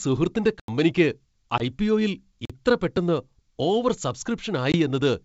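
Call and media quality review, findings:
Block of digital silence, 0.60–0.68 s (about 85 ms) and 2.45–2.50 s (about 43 ms). Likely playback buffer not filled in time and output zeroed, so the sound drops to dead silence. Lengths fit 4096- and 2048-sample buffers.

Packet loss on an ADPCM call, 1.58–1.62 s and 4.72–4.77 s, 20 ms each, about one packet. A hard-edged hole, then the speech resumes slightly distorted because the decoder's predictor and step size lost sync with the sender's. The G.722 wideband path at 64 kbit/s carries the stream.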